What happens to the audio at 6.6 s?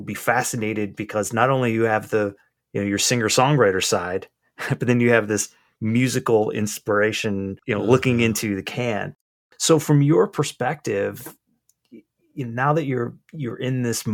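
Nothing goes wrong at 6.6 s; the audio runs on intact through that moment, with no dropout, click or distortion.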